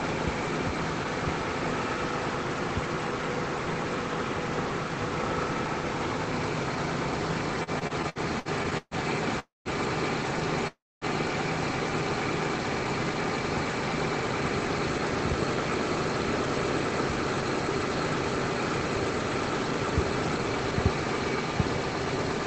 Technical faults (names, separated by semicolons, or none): repeated stalls (stutter); call audio freeze